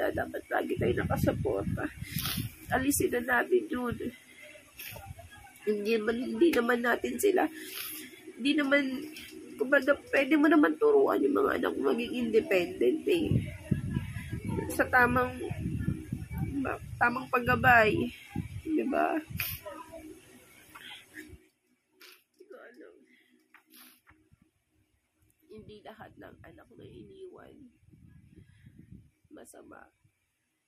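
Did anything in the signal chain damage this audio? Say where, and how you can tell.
No, nothing in the signal chain damaged this audio; there is nothing to point to at any stage.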